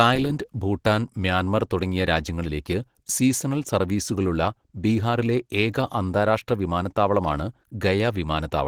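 All the way through, the speech sounds muffled, hoarse and plainly grainy, likely from Opus compression in its hybrid mode at a low bitrate, around 16 kbps.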